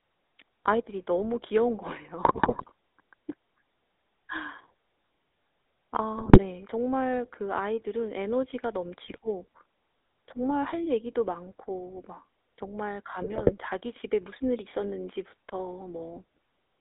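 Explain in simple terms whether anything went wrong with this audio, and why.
The whole recording carries the GSM full-rate codec sound: an old mobile-phone coding that thins the voice and adds a buzzy, gravelly roughness. GSM bit errors garble the sound into squawks and gargles at 2.22–2.71, 6.18–6.39, 9.05–9.18 and 13.2–13.53 s, where corrupted data reached the decoder.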